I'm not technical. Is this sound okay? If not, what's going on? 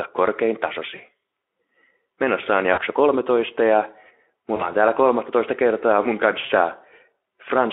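No. There are four short dropouts from VoIP packet loss concealed by the speech codec, at 0.95–1.01 s, 2.73–2.82 s, 4.55–4.72 s, and 6.45–6.51 s, the last right after "kertaa mun". Each time, about 40 ms of the call's data never arrived. The speech decoder, which is Speex here with only light wear of its own, filled each gap by stretching the last bit of voice into a brief fading tone or noise, and the speech sounds weak or distorted just afterwards.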